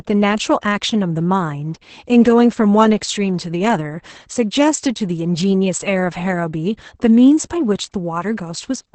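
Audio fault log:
Throughout, Opus voice compression: the speech sounds muffled, hoarse and faintly robotic, with nothing above about 8.7 kHz, so sibilants and breath lose their air. The codec is running its SILK linear-prediction coder in wideband mode, which removes the top of the spectrum. The damage is heavy, which fits a bitrate of around 10 kbps, where the excitation driving the voice model is coded coarsely and turns rough and buzzy instead of natural.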